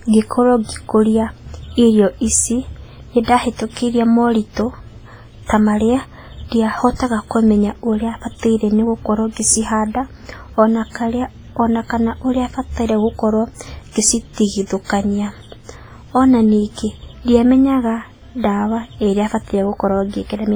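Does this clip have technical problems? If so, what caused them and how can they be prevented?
Yes. Throughout, the speech sounds washy and ringing, with hiss breathing alongside it, likely WMA compression at a low bitrate around 24 kbps discarding weak detail. Prevent this by encoding at a higher bitrate or with a better codec.

From 3.24 to 3.28 s, a short hiss runs about 45 ms ahead of an attack, which is pre-echo from block-spread quantisation noise. Prevent this with an encoder that switches to short blocks on transients.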